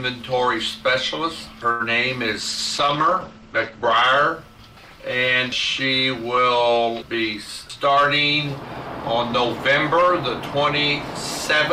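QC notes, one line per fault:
1.71–1.82 s, short stall from a late packet: sound is held for 85 ms until the packet arrives, then resumes where it left off; nothing is skipped, unlike a dropout.
2.41–4.03 s, call bitrate drop: encoding falls from 64 to 11 kbps and bandwidth narrows from 20 kHz to 8 kHz, giving watery coarseness, not just muffling, before recovering.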